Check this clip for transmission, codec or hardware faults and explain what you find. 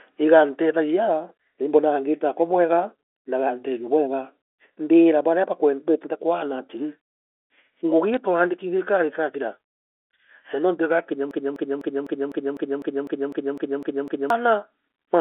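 Two faults stand out on this phone-band speech recording: a brief burst of bit errors and a long broken-record loop.

Bit errors on a digital phone line at 8.14 s: a few flipped bits in the G.711 stream each corrupt a single sample. At this very low error rate they leave a short, sharp tick or two over the speech, which sits within the narrow 300 Hz to 3.4 kHz telephone band.

Broken-record loop from 11.31 s to 14.30 s, starting just after "nuntu igakinya": a fragment about 0.25 s long repeats exactly, back to back, 12 times. The likely cause is a stalled player or stream resending the last piece it held. The speech that belonged in those three seconds is lost.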